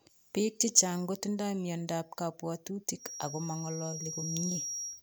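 From 2.96 s to the end of the speech, a thin feedback whistle near 5.7 kHz sits roughly 10 dB below the voice, swelling and fading slowly, likely from a loudspeaker-to-microphone loop held just short of runaway. A spectrogram shows one steady horizontal line there.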